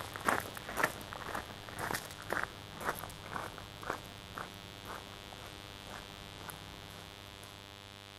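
Mains buzz runs throughout: sharp switching spikes twice per 50 Hz cycle leak in, stacking harmonics into a steady raspy drone only about 10 dB below the sound.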